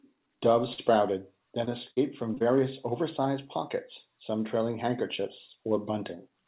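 At 0.74 s and 1.64 s, short concealed packet loss: about 40 ms and 20 ms of audio arrived too late, and the receiver extended the previous sound to cover it. The first fill also adds roughly 10 ms, and each gap is heard as a brief smear or wobble. At 1.91 s a burst of packet loss drops 60 ms in a row; the concealment carries the last sound forward while fading it, so it becomes a short held buzz or hiss, and the missing section is gone when the audio resumes at 1.99 s. Two more short concealed losses follow back to back at 2.35 s and 2.38 s, each covering about 20 ms, and together they produce a brief smear or wobble. Throughout, the narrowband call path cuts everything above 4 kHz, which fits G.711 A-law.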